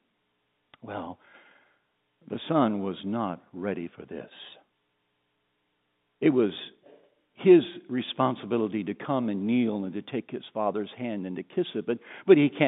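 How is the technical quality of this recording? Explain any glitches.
No glitches can be heard in this telephone-band speech.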